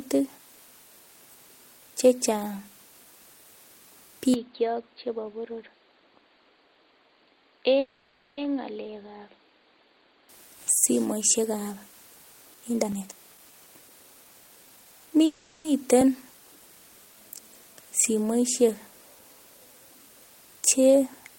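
Speech clip with a handful of things going on. From 4.34 s the sound turns dull and boxy, which is most likely an input switched to a poorer device. Nothing gets through above about 4.7 kHz, the level drops by roughly 10 dB, and a new noise floor comes in around 35 dB under the speech. There's no gap at the changeover, and the fuller sound returns at 10.29 s, right before "simoisiek ab".

Inside that stretch, at 7.79 s, there's a call audio freeze. The last bit of sound gets stretched into a fading buzz for about 580 ms, with roughly 10 ms of actual silence. Then the speech picks up where it left off, so nothing's missing, but everything after it lands 580 ms later. A second freeze at 15.26 s fills about 390 ms with no silence at all. Both are what you'd expect if packets got held up in transit and the jitter buffer drained, leaving the receiver to improvise until they turned up.

After "simoisiek ab", from 12.10 s to 21.14 s, you get periodic USB or driver dropouts. 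They're small ticks spaced every 1.02 s, about ten of them, each where roughly a millisecond of audio was skipped outright rather than replaced with silence. That pattern points to something on the bus or in the driver stalling on a regular timer.

Overlapping that, 12.54 s to 15.14 s is a jitter buffer speed-up. The speech runs at about 122% of normal pace without any pitch change, because the buffer was trimming pitch-period-sized chunks, around half a second in total, to catch up on the delay.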